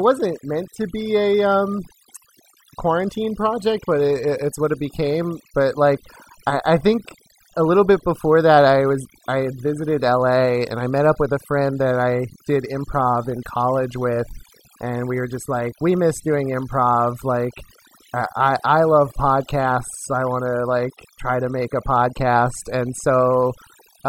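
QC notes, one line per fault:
Throughout, overdone noise removal: a noise reduction stage set far too aggressively keeps cutting individual frequency bands down to nothing whenever their level sits near its noise estimate, and the softer parts of the speech fall below that threshold and vanish with the noise. What remains between phrases is an unnatural near-silence sprinkled with twinkling, chirpy specks. The voice itself has its quieter detail stripped away.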